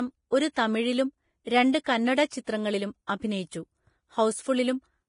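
Heavy lossy coding, likely Vorbis compression, runs through the whole speech clip, which fits a low bitrate near 29 kbps. Nothing remains above 10.5 kHz, and the coarsely quantised upper band turns detail into grainy hiss, roughening tones and softening consonant onsets.

From 3.07 to 3.09 s, a sharp attack lands late in a transform block, and the block's evenly spread quantisation noise fills the 26 ms gap before it. The result is pre-echo: a brief hiss ahead of the onset, which sounds smeared rather than crisp.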